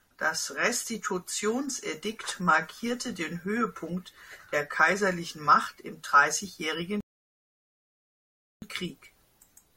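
At 7.0 s the speech just drops into silence for about 1.6 s, then picks up at 8.62 s right where it left off. That's a rebuffering stall: the player ran dry of downloaded audio and waited for more, so nothing's missing, just extra time added.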